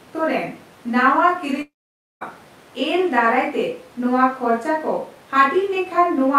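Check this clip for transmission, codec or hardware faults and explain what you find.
One fault stands out. A long network dropout runs from 1.61 to 2.23 s and is likely the cause of the gap. No audio arrived for about 0.6 s. The receiver stretched the last sound into a fading buzz before roughly 0.52 s of silence, and the speech then resumes with that stretch lost.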